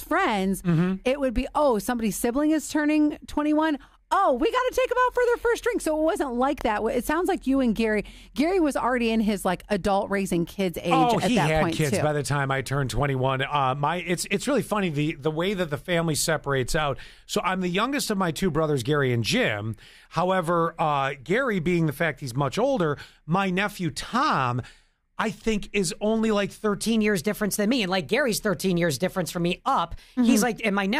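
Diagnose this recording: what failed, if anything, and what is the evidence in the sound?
A section at the wrong speed runs from 26.84 s to the end at 31.0 s: the sound abruptly plays 1.14 times fast, pitch rising about two semitones with tempo. This likely comes from a playback or editing stage resampling that section against the wrong clock.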